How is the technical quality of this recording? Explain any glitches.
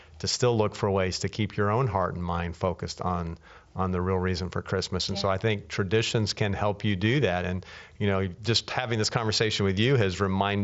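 Nothing here stands out as a glitch; the speech comes through a Bluetooth mSBC headset link as you'd expect, with the top end stopping at about 7.7 kHz, which is simply where that wideband headset codec tops out.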